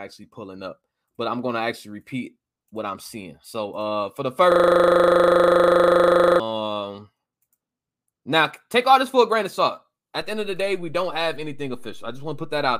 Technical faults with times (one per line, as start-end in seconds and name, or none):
4.52-6.40 system hang loop
10.21-12.79 DC step